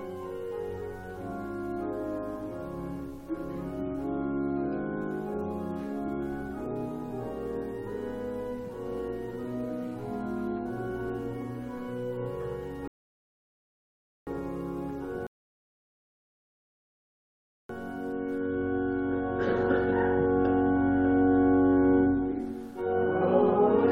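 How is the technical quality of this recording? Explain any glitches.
Two rebuffering stalls interrupt the playback. The first runs from 12.88 to 14.27 s, adding about 1.4 s, and the second from 15.27 to 17.69 s, adding about 2.4 s. Each time, the player exhausted its downloaded audio and halted until more data arrived. The sound drops abruptly to silence and then picks up exactly where it left off, so nothing is missing, only delayed. On a waveform both show as flat, empty gaps, and on a spectrogram as blank vertical bands.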